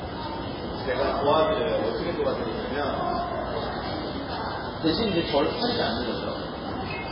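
From start to finish the sound is dull and watery, with a swirling, metallic shimmer and nothing at all above 5.3 kHz. This is heavy MP3 compression, likely at a bitrate that fits around 16 kbps: starved of bits, the encoder cut off the treble and dropped weak frequency lines that flicker between frames. A spectrogram shows a flat ceiling at 5.3 kHz and patchy, blocky holes below it, while transients smear across the waveform.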